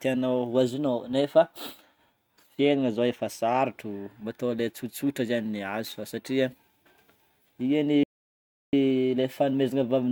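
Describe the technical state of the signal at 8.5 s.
At 8.5 s the speech is inside a playback stall running from 8.03 to 8.73 s, about 0.7 s of dead silence, likely because the player ran short of buffered data. The waveform flatlines and the spectrogram shows a blank vertical band before the speech resumes.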